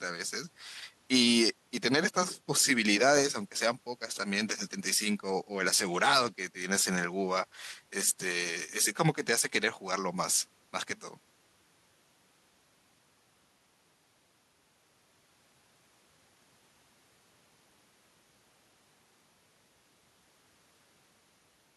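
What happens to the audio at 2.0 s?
Nothing goes wrong at 2.0 s; the speech runs on intact through that moment with no dropout, click or distortion.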